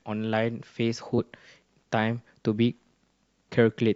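Compressed frames skipped at 1.17 s and 2.58 s: the speech jumps forward where frames were missing or rejected.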